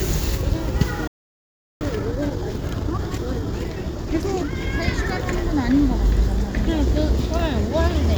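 A recording of sounds that cuts to silence at 1.07 s and stays silent for about 0.73 s before resuming at 1.81 s. This is a playback stall, likely the player running out of buffered data or its thread being blocked. Unlike a brief dropout, the gap lasts long enough to register as a halt. From 1.81 s to 4.73 s comes time-compressed catch-up: the player shrinks its backlog by splicing out short pieces, so the audio runs at 1.25 times normal speed. The pitch stays unchanged, which sets it apart from simply playing the audio too fast.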